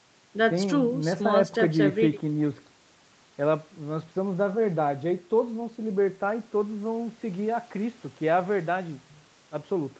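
No technical faults can be heard anywhere in the speech. The audio has nothing above 8 kHz, which fits a WebRTC call path running a wideband call codec.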